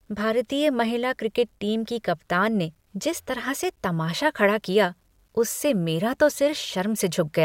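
Throughout the speech, the signal was likely reduced to a coarse word length, which fits about 10-bit rounding, with no dither added first: a case of low bit depth without dither. The rounding error sits roughly 50 dB below the signal, and because it tracks the waveform rather than forming steady hiss, it surfaces as a grainy, signal-dependent distortion, heard most in quiet passages and decaying tails, which turn gritty and sputter.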